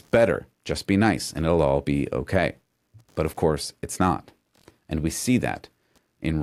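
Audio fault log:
throughout, computer activity noise: changing processor, graphics or mouse load is pulling on the ground the audio circuit shares with the computer, so the ground reference wobbles in step with that work. It comes through as a faint buzzing chirp pulsing at around 70 times a second, sitting roughly 45 dB beneath the speech, and it rises and falls with the machine's activity rather than following anything in the speech itself.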